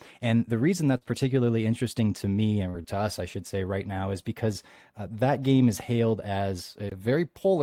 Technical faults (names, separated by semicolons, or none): scattered short gaps